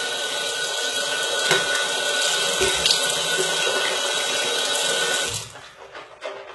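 From start to finish the treble sounds gritty and metallic, bright yet synthetic, with nothing above 11.8 kHz. This is likely heavy HE-AAC compression, consistent with about 16 kbps: upper bands are rebuilt from copied lower ones, so harmonics misalign across the crossover.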